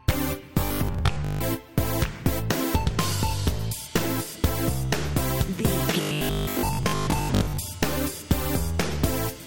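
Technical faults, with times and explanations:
0.61 to 1.41 s and 6.01 to 7.59 s, robotic sound from repeated short buffers: the sound turns into a rigid, metallic 50 Hz buzz, likely because audio arrived too slowly and the player looped the last 20 ms segment while real audio was skipped. About half of the first stretch and most of the second is repeated material. A spectrogram shows evenly spaced harmonics at multiples of 50 Hz, and the waveform shows identical 20 ms blocks repeating.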